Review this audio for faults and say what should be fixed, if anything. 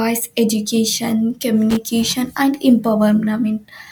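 Loose connector crackle occurs from 1.70 to 1.77 s in the speech. A worn contact briefly makes and breaks, chopping the signal into scratchy crackle. Clean or replace the cable and reseat connectors firmly.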